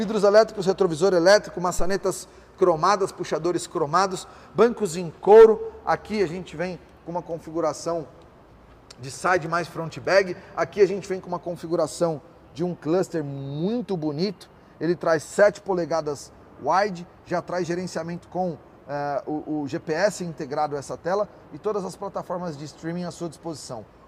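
At 1.79 s there's a phantom power thump: the supply switching on or off on a live input, a deep thud peaking about −13 dBFS, dying away within roughly 41 ms.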